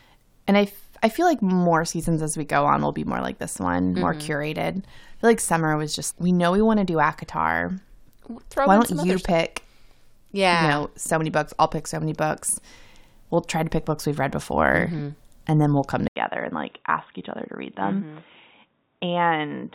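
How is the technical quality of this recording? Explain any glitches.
One glitch affects the recording. From 16.08 s, right after "then we'll come", the sound turns dull and boxy and stays that way to the end. This is most likely an input switched to a poorer device. About 80 ms of silence marks the switch. After it, nothing above 3.8 kHz gets through, the level drops by a few decibels, and a faint new background noise appears. A simple filter or codec change would only cut the treble. Here the gap, the level drop and the new noise floor arrive together, which points to a different microphone taking over.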